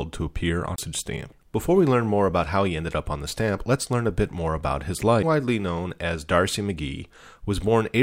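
A CD skip at 0.76 to 0.78 s and again at 5.22 s: the laser jumps tracks, leaving a brief gap, seen as a waveform dropout and a spectrogram discontinuity.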